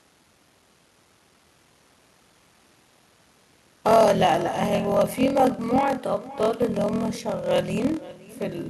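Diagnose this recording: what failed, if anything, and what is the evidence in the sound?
Call processing failed: this is echo with no canceller. Throughout the clip, the speech is shadowed by a thinner copy about half a second later. It sits about 19 dB below the direct speech. The far end's loudspeaker feeds its microphone, and nothing subtracts that pickup before it returns.

A driver or buffer stage also failed, with a block size mismatch (padded). A steady 41.7 Hz buzz runs through the whole clip. The speech plays at 0.889 times normal speed, with its timbre unchanged. The writing stage delivers short blocks, which fits 1024 samples. The reader zero-fills the remainder of each block, leaving a gap every cycle.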